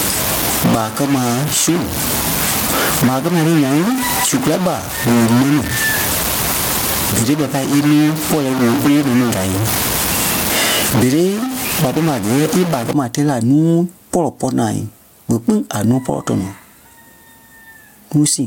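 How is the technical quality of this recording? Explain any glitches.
Technical quality is poor, with two faults.

Gain pumping runs through the whole clip: the gain swings by something like 15 dB, leaving the speech squashed. The likely cause is gain set too high, with a fast limiter or compressor clamping down on every peak.

A stuck bit lasts from the start to 12.93 s, ending just before "ma tɛɛ la": added noise and distortion on the speech, with pauses filled with noise. The likely cause is one data bit frozen at a fixed value, offsetting many samples and flipping with small signal swings around zero.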